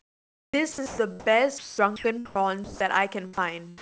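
From 0.00 to 0.98 s and again from 1.58 to 2.39 s, the speech is chopped, likely by the sender's voice detector toggling on and off. About 0.71 s and 0.38 s of speech become comfort noise. That repeated switching distinguishes it from a single dropout. At 2.64 to 2.80 s and 3.33 to 3.37 s, the speech is likely dropped by the voice detector: one continuous gap each, 160 ms and 40 ms, filled with steady noise before speech resumes. Throughout, nothing sounds above 8 kHz, which fits a G.722 call codec.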